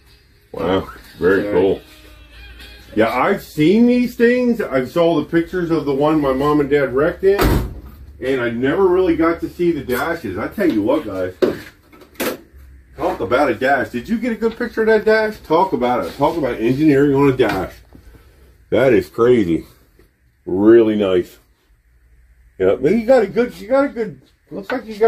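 No technical faults can be heard anywhere in this recording; the signal stays steady and intact throughout.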